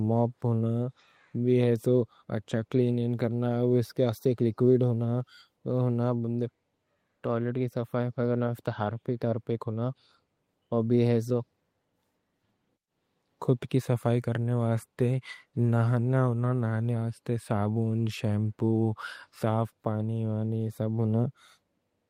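No technical faults can be heard anywhere in the speech.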